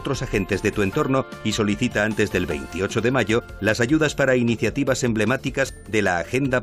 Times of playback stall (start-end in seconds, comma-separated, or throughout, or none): none